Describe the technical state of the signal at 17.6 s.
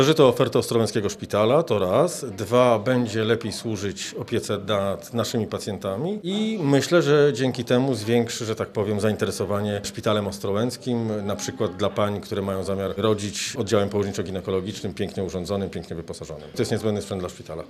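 At 17.6 s the signal is intact, with no dropout, clipping, glitch or other fault audible at that moment.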